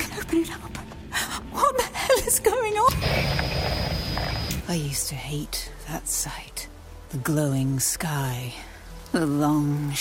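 No technical faults can be heard anywhere in the audio.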